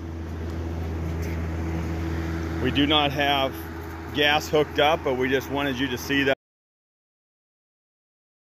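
An audio dropout to silence begins at 6.34 s and runs to the end of the clip: the sound stops abruptly mid-flow and is replaced by silence for about 2.1 s, with no room tone or noise floor left. On a waveform the trace collapses to a flat line; on a spectrogram every frequency goes black from that point. The likely cause is a lost input, such as a disconnected device, failed link or accidental mute, while recording continued.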